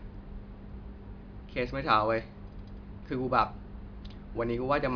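No technical faults are audible.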